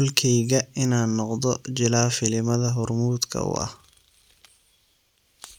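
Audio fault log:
No fault can be heard anywhere in this speech recording. There is nothing to log against any point in the audio.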